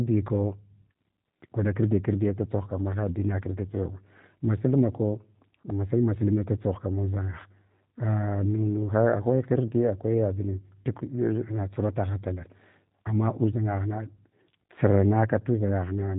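Speech passed through the G.729 codec for its whole length, and the damage is plainly audible. Each 10 ms frame is rebuilt from a vocal tract filter, a pitch predictor and a handful of pulses instead of the original waveform, at a rate that fits 8 kbit/s VoIP. Nothing above 4 kHz survives, so sibilants lose their edge, and the pulse-built excitation gives the voice a rough, buzzy, synthetic grain throughout.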